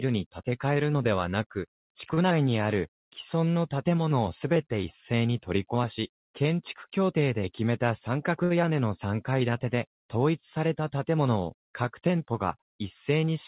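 At 2.14 to 2.19 s and 8.44 to 8.52 s, a short stall from a late packet held the last sound for 31 ms and then 62 ms before playback resumed without loss. On the waveform, a repeated flat stretch appears; on the spectrogram, smeared horizontal bands, all within the 4 kHz G.711 band.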